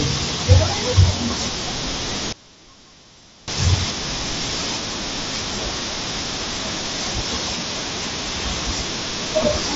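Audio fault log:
2.33 to 3.48 s, one channel inverted: sound falls about 22 dB to a faint residue, likely polarity-reversed channels cancelling in mono; the waveform collapses and the spectrogram fades.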